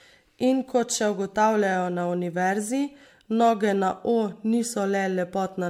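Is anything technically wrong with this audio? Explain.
Yes. Throughout, the speech sounds swirly, hollow and smeared, with blurred attacks and nothing above 19.7 kHz. This is likely generation loss from about seven MP3 re-encodes.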